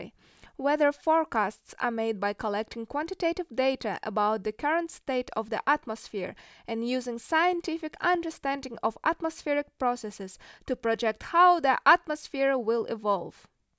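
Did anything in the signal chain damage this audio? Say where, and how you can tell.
No, nothing in this recording stood out on listening as damage introduced anywhere along the chain.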